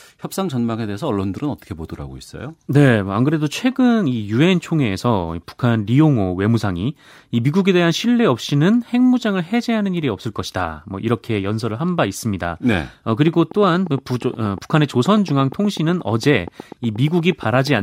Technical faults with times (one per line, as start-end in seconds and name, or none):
13.28-17.80 train of clicks